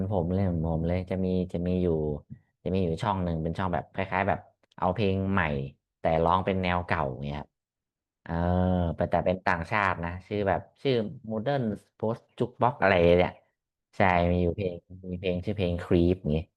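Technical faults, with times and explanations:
Nothing stood out on listening to this speech recording.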